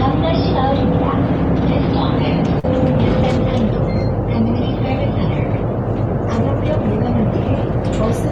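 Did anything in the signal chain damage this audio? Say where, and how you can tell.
Yes. At 2.59 to 2.65 s there is a brief smear in the sound, a short stretch where the audio seems to hang on and blur before snapping back into place. That is short concealed packet loss at the network stage. About 40 ms of audio arrived too late or not at all, and the receiver's decoder papered over the gap by extending the preceding sound, then crossfaded back into the real signal once packets resumed.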